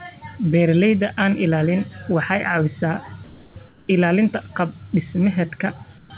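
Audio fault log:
3.24–3.56 s, 3.68–3.88 s and 5.98–6.10 s: comfort noise in place of the background. In these pauses the real background turns into a flat, featureless hiss, about 2, 5 and 4 dB quieter, likely because the sender stopped transmitting and the receiver filled the gap with synthetic noise.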